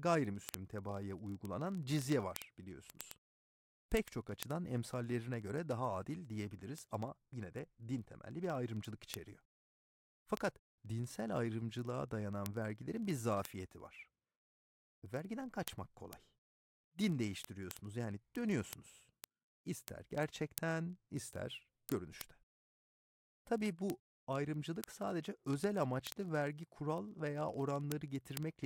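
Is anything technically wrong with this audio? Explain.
Yes. Word clock ticks run from 0.11 s to 28.64 s: an unlocked receiving clock drops or repeats a sample roughly every 30 ms, giving steady sharp ticks of uneven strength.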